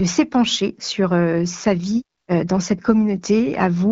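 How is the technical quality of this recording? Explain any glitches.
The recording has one glitch, a brief stretch of AMR comfort noise, heard over speech carried by the AMR wideband (HD Voice) codec, which leaves only light coding damage.

From 2.17 to 2.27 s, between "sur euh sa vie" and "euh dans cette", the phone judged the talker silent and sent no speech frames for 100 ms. The receiver filled that gap with synthetic noise built from a rough estimate of the background's level and spectrum. It sounds like a short, smooth, even hiss that replaces the real room sound. A packet loss or dropout would instead leave dead silence or a smeared repeat of the preceding sound.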